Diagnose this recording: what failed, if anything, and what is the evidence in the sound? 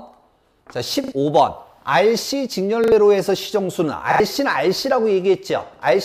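The playback path's driver or buffer stage failed with a repeated buffer at 1.04 to 1.12 s, 2.84 to 2.92 s and 4.12 to 4.20 s. Each time the same brief slice sounds three times in a row, with hard joins that fit a 40 ms buffer, and a short stretch of the original audio never returns. Unlike a dropout, there is no gap of silence, and unlike network concealment there is no smeared fade, only exact repeats.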